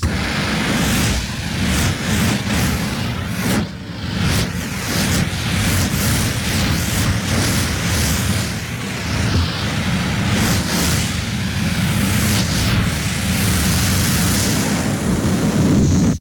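Sample clock jitter runs through the whole clip: an unsteady converter clock, wandering by a few microseconds, mistimes samples, adding a roughness roughly 25 dB below the sound that swells on loud, bright passages. A spectrogram shows a haze rising with level and vanishing in silence.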